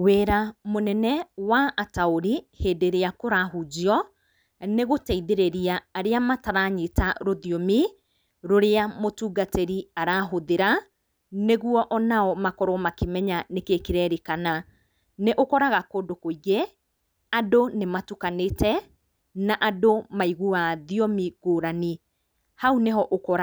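Nothing technically wrong turns up anywhere in this speech recording, so there are no faults to point to.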